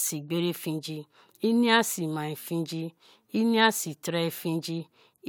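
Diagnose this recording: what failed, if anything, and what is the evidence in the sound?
Nothing failed: the sound gives no evidence of a fault at any stage of this speech recording.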